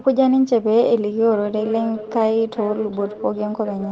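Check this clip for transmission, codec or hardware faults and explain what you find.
One fault stands out: a feedback echo between two devices, from 1.31 s to the end. A second device replays the call into the microphone, so speech returns roughly every 0.4 s, peaking about 15 dB below the direct sound. A spectrogram shows fainter copies stacked at that spacing below the call path's 8 kHz ceiling.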